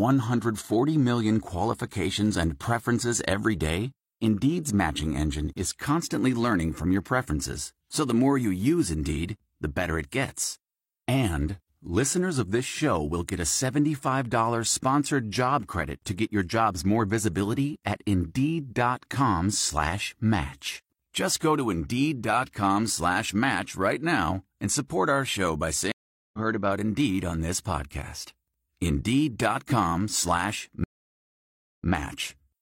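At 25.92 s a stream reconnect leaves 0.42 s of silence, and the speech resumes from a fresh decoder roughly 0.2 s further on. At 30.84 s a second reconnect silences 0.96 s, then repeats 93 ms. Both appear as flat waveform gaps and blank spectrogram columns.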